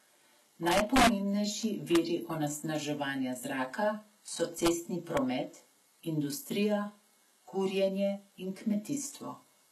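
From the very start, the speech has a hard ceiling: nothing above 12.3 kHz, and the top end sounds bright but synthetic. The s sounds come out gritty and a bit lispy, with a metallic sheen, because the treble is patched together rather than carried through. That points to likely HE-AAC compression running heavy, which fits a low bitrate around 16 kbps. The codec codes only the lower band and rebuilds the highs by copying lower content upward under a coarse envelope, so harmonics don't line up across the seam.

On top of that there are integer overflow cracks. The first and longest runs from 0.67 to 1.07 s, where peaks push about 3 dB past the limit. Shorter ones land at 1.95 s, from 4.65 to 4.68 s, and at 5.17 s, each only about 1 dB over. In each case the sample values wrapped to the opposite sign instead of being limited, so every peak over the limit flips across the full range. That's why these hit as violent, sharp cracks, much harsher than ordinary clipping.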